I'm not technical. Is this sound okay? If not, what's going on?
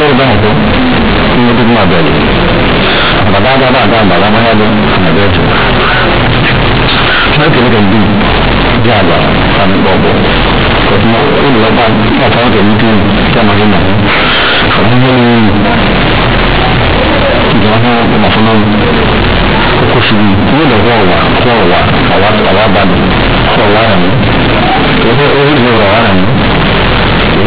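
No. The telephone-coded A-law audio is being played back as if it were plain, linear 8-bit sound, with no decoding step. This is companded audio read as linear. Quiet moments blow up as loud as loud ones, so the whole speech clip sounds harsh, buzzy and distorted, with heavy noise in the pauses.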